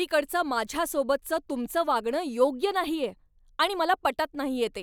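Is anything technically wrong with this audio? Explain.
No, the speech recording shows no technical faults.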